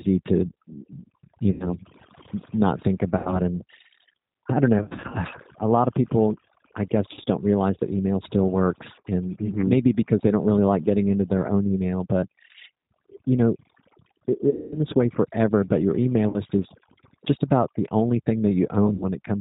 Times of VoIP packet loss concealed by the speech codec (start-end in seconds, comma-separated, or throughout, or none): 1.52-1.70, 3.17-3.41, 4.78-5.17, 7.14-7.28, 8.94-9.05, 14.50-14.78, 16.29-16.39, 18.94-19.05